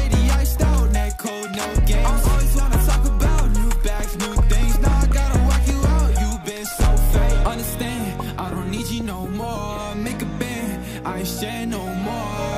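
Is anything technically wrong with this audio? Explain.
No, no technical faults detected.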